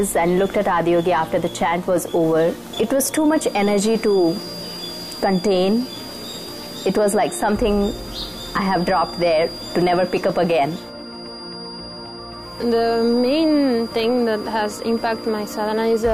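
From 3.23 s onward, a thin 4.8 kHz feedback whistle wavers about 20 dB under the sound, unlike a rock-steady electrical tone. It is likely a loudspeaker-microphone loop.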